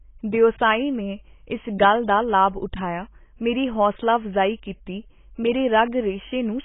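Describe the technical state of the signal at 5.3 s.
At 5.3 s, as throughout, the speech sounds dull and smeared, with nothing above 3.8 kHz. Likely heavy AAC compression, fitting a bitrate near 16 kbps.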